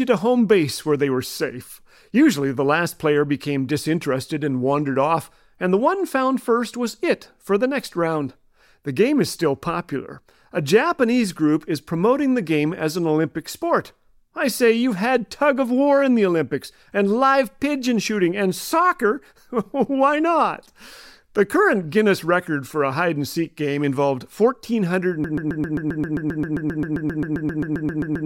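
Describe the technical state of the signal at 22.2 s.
At 22.2 s the speech signal is intact, with no dropout, distortion, glitch or other fault to be heard at that moment.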